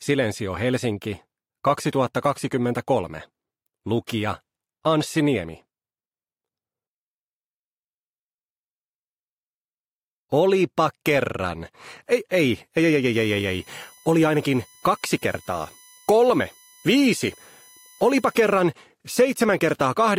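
From 13.13 to 18.60 s, current drawn by the USB bus in 1 ms frames leaks into the audio path through power or ground, causing USB whine: a steady, fixed-pitch tone built on 1 kHz, loudest at its 19 kHz multiple, roughly 30 dB below the sound.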